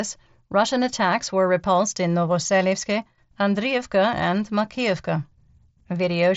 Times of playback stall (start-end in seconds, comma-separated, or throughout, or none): none